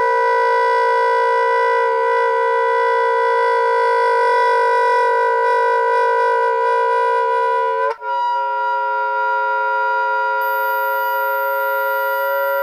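From 10.41 s to the end, a thin high whistle drifts between 13.2 and 13.5 kHz, roughly 20 dB below the sound: a switching supply whistle from a supply running in audible burst mode or beating with another one.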